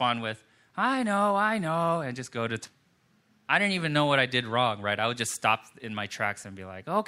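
Right after "and just go to", at about 2.65 to 2.70 s, the speech jumps forward with a small blip. It's a stream segment skipped: one chunk of the stream likely failed to load, so the player dropped it and went straight on to the next.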